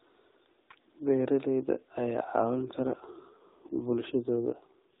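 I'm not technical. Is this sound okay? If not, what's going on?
No. From about 2.56 s to the end, the speech gets rougher and more buzzy, almost robotic. That's an AMR rate drop: the phone network told the mobile codec to squeeze the voice into fewer bits, and the usual phone-call sound loses detail.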